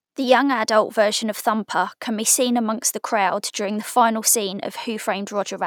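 Speech recording with no technical faults to report.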